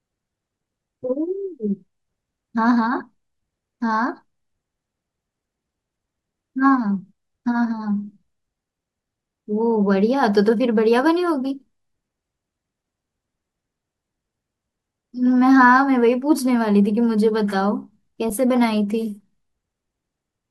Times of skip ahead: none

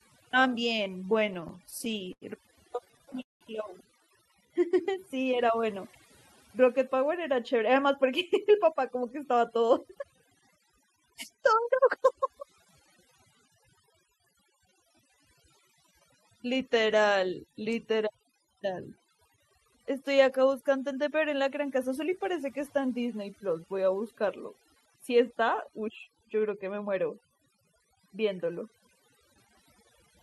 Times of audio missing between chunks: none

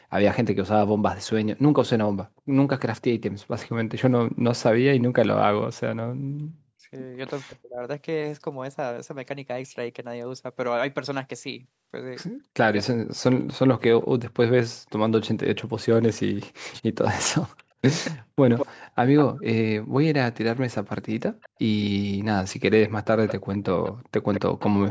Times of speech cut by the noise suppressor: none

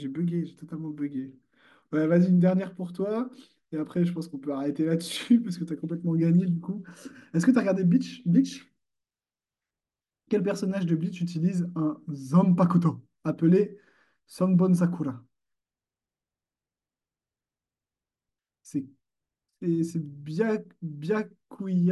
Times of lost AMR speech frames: none

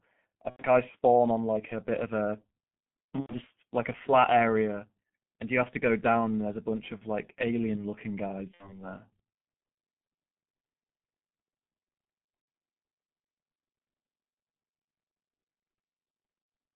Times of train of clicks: none

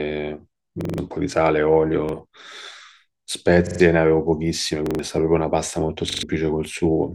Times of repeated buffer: 0.81-0.98, 2.09-2.13, 3.67-3.80, 4.86-4.99, 6.10-6.23

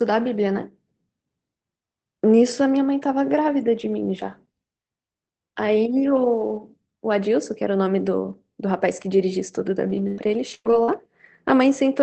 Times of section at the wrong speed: none

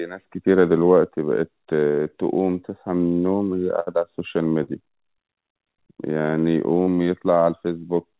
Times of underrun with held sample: none

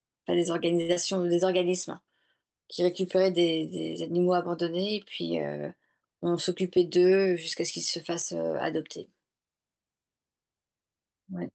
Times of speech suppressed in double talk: none

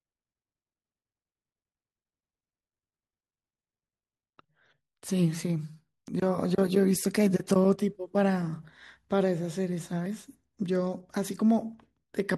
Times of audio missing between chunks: 6.08, 10.06

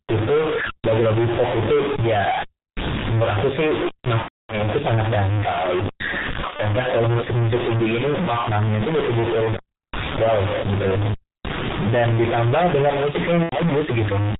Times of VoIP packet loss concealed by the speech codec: 4.22-4.59, 6.56-6.64, 13.43-13.57

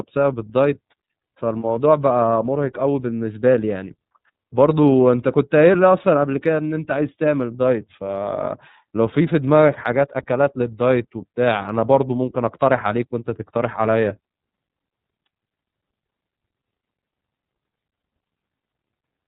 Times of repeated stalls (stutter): none

